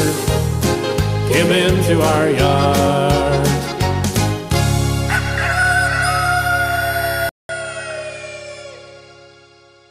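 At 7.29 s the audio drops out for about 200 ms, then returns a little quieter and duller, with nothing above 9.3 kHz and a faint new background hiss well beneath the sound. This character holds to the end. The likely cause is the input switched to a poorer device partway through: the recording jumped to a different microphone or a headset's narrower call path, which brings its own bandwidth limit, gain and noise floor.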